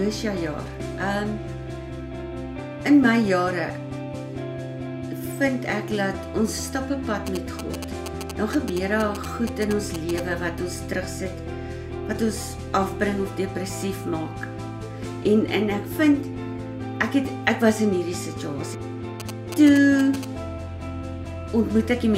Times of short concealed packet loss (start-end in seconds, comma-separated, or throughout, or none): none